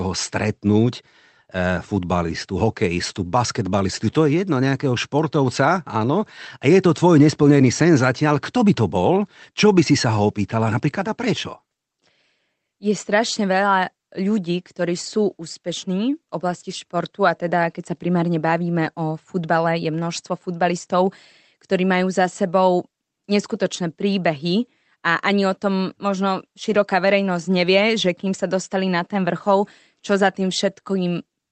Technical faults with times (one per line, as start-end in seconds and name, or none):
none